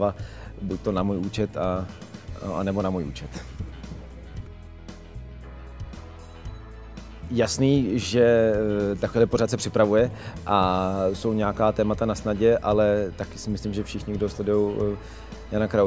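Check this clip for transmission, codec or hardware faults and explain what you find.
No faults turn up in this clip, so there is nothing to explain.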